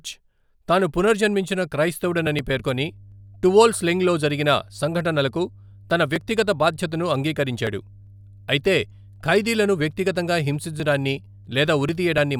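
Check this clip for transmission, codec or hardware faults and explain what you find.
Mains hum enters the speech at 2.04 s, just after "తాను పునర్జన్మించిన", and continues to the end of the clip at 12.39 s. It is a steady 50 Hz tone with some low harmonics, sitting roughly 25 dB below the speech. The mechanism is power-line coupling: a ground loop or a nearby transformer induces the 50 Hz supply frequency into the signal path. The result is a constant low drone under the voice that does not follow its level or pauses.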